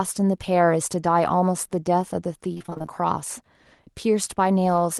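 From 2.53 to 2.90 s the speech turns choppy and robotic as short pieces drop out, none longer than 24 ms. This is repeated packet loss: lost packets were patched by stretching the previous sound, covering roughly half the stretch.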